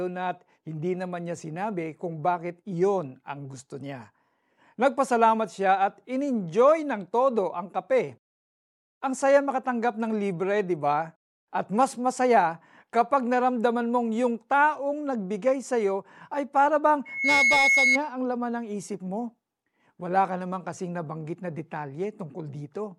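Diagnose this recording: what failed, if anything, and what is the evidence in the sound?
Loudspeaker feedback squeal in the analogue mic-to-speaker loop: after "iyo ay para bang", a 2.2 kHz tone swells from 17.05 s to about 5 dB above the speech, ending at 17.99 s before "ang laman ng". On a spectrogram it is one bright horizontal line. Loop gain above one at that frequency keeps it growing.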